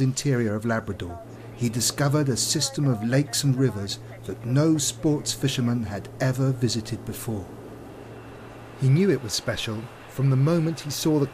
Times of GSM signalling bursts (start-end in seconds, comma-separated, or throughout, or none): none